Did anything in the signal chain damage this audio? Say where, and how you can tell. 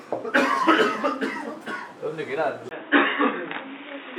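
Yes. At 2.69 s, after a 20 ms gap, the sound turns dull and boxy, with nothing above 3.8 kHz, a level shift of around 5 dB, and a new noise floor roughly 35 dB down. This is likely an input switched to a poorer device. A codec dropping bandwidth would not bring its own noise or a level jump.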